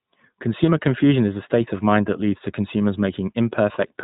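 The whole clip has gone through the iLBC codec. Nothing above 4 kHz survives, and the speech has that slightly rough, synthetic edge that plainly comes from the excitation coding. The character fits iLBC's 20 ms frame mode, at about 15.2 kbps.

There are two spots of lost iLBC frames, each about one frame long. The first is at 0.66 s, just before "confusion is a state". The second is at 2.40 s, between "of mind that leads" and "to consumers". In each gap the decoder fills in by repeating the last pitch cycle with some noise mixed in, so you hear a short, buzzy held vowel. Because each frame decodes on its own, the speech is clean again straight after.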